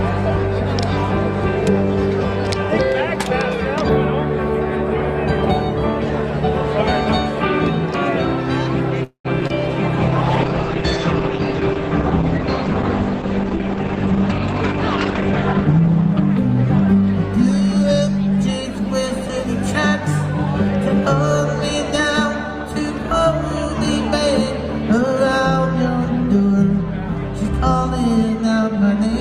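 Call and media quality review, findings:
Call audio freeze, 9.03–9.27 s: last sound held as a fading buzz/hiss, then about 110 ms of silence, then the audio picks up where it left off with nothing lost. Likely an empty jitter buffer after delayed packets, which adds roughly 212 ms of delay.

Short concealed packet loss, 9.41–9.43 s and 9.47–9.52 s: quick smears right after the freeze. About 20 ms each never reached the decoder. The receiver bridged each gap by extending the prior sound, then blended back into the real audio.

Call bitrate drop, 9.99–17.09 s: audio goes rough and muffled. The encoder was pushed from 32 to 10 kbps after the bandwidth estimate fell, with the bottom rate held for about 5.4 s. Top end is cut from 20 kHz to 8 kHz. It clears by 17.09 s.

Jitter buffer speed-up, 15.32–16.36 s at 106% and 16.81–17.84 s at 108%: audio sounds hurried at unchanged pitch. The buffer was over target, so the receiver snipped short pitch-period chunks, about 70 ms and then about 100 ms in total, to cut the delay.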